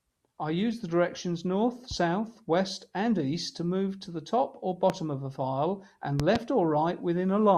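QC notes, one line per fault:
4.90–4.92 s, loud pop: a single sharp thump about 15 dB above the speech, which carries on unbroken beneath it. This is a voltage pulse added to the signal, likely from a plug, switch or static discharge, rounded off by the circuits after it.
6.20–6.38 s, loud pop: two pops in quick succession, peaking about 15 dB up. The speech is never interrupted, unlike a dropout.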